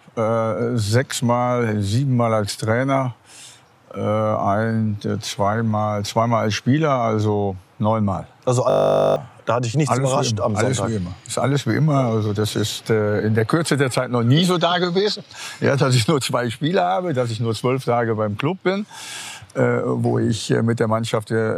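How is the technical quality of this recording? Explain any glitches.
The recording has one clear glitch, a system hang loop from 8.7 to 9.16 s. The playback or recording system froze while the audio hardware kept replaying the same ring buffer, so one 20 ms slice repeats exactly, which fits a 20 ms buffer. At that length the repeats fuse into a steady 50 Hz buzz, and about half a second of real audio is lost. Unlike mains hum at the same pitch, it starts and stops abruptly and replaces the sound instead of sitting underneath it.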